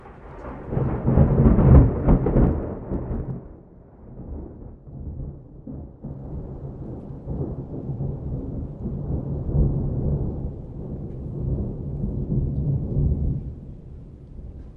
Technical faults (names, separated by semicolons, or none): zipper noise